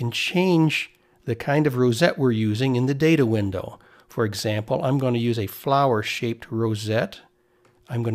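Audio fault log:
No technical faults can be heard anywhere in the audio; the signal stays continuous and steady throughout.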